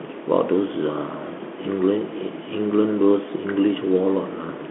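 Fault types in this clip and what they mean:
Bluetooth CVSD headset codec: a one-bit delta coder stepping up or down at 64 kHz, with speech confined to roughly 200 Hz to 3.4 kHz and nothing above 3.8 kHz. Unlike plain band-limiting, it adds scratchy sibilants, slope-overload grit on loud peaks and a granular hiss throughout.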